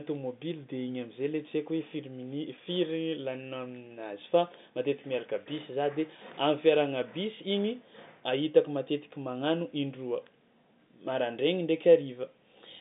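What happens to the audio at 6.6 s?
Nothing goes wrong at 6.6 s: the speech there carries on intact, with only the narrow telephone band of the G.711 line as its normal character.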